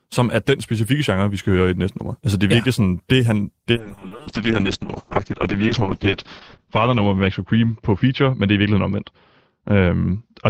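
Call bitrate drop in this speech from 3.72 s, after "ja sådan det han", to the end: the encoder falls from 32 to 6 kbps and cuts everything above 8 kHz, leaving coarse, muffled sound.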